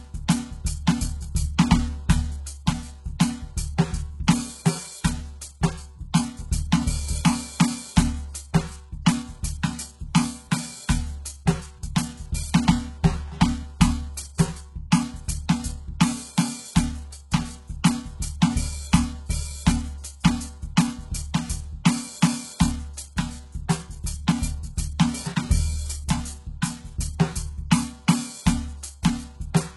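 From start to finish the music carries heavy HE-AAC compression artefacts. The treble does not sound like the original. Cymbal and sibilant detail comes across as gritty and metallic, and the upper harmonics fail to line up with the lower ones. This points to a very low bitrate, around 12 kbps, and likely to spectral band replication rebuilding the top octaves from copied lower bands. On a spectrogram, energy stops sharply at about 11.5 kHz, with blocky, repeated texture below that cut-off.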